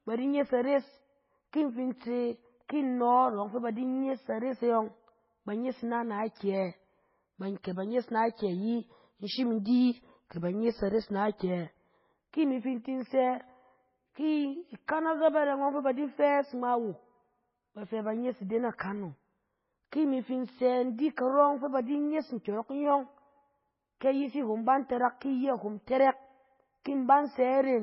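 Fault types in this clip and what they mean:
MP3 compression: Throughout the speech there is nothing at all above 5.6 kHz, so it sounds dull and boxed-in, with a heavy, watery swirl and smeared consonants. The likely cause is an MP3 encoder starved of bits, which fits a very low rate of about 16 kbps. It cuts the treble at a fixed point and drops weaker frequency lines, which flicker in and out from one frame to the next.
pre-echo: At 7.63 s a sharp onset is preceded by a brief hiss, spread over about 15 ms, which softens its attack. The transform codec spreads its quantisation noise across the whole block. Noise sized for the loud attack therefore also fills the quiet gap just before it, where nothing masks it, so the attack comes out blurred and announced by a smear of noise.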